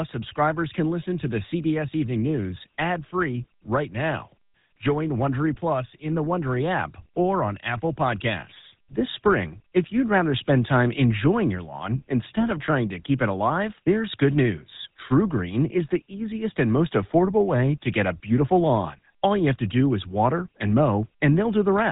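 The speech sounds buzzy and gravelly from start to finish, with a boxed-in, narrow tone and nothing above 3.8 kHz. This is GSM full-rate codec damage, consistent with a 13 kbps rate: the codec rebuilds the voice from a vocal-tract model driven by coarse, regularly spaced pulses.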